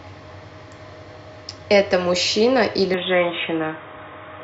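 At 2.94 s the speech abruptly loses its top end and stays that way to the end: nothing above 3.8 kHz, so it turns dull and boxy. There is no gap at the transition, the level stays roughly the same, and a faint new background noise appears some 55 dB below the signal. The hard band limit, tonal shift and changed noise floor point to the likely cause: the input switched to a poorer device mid-recording.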